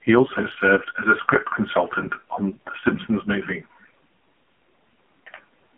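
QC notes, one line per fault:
throughout: AMR narrowband mobile codec. The speech sounds thin, buzzy and synthetic, with nothing above about 3.4 kHz and little below 150 Hz, as on a phone line. Consonants lose their edge and voiced sounds take on a reedy, machine-like quality. The codec rebuilds speech from a vocal tract model excited by a few pulses per subframe, and at a low rate, which fits about 5.9 kbps, that model is coarse, so the damage is heavy.
2.54–2.59 s: lost AMR speech frames. Just after "as a script consultant", the sound briefly dips and warbles for about 20 ms before carrying on, rough for a moment as it recovers. A single speech frame, likely corrupted in transmission, failed its check, so the decoder filled the gap by repeating the last good pitch and vocal tract settings at reduced gain rather than decoding fresh audio.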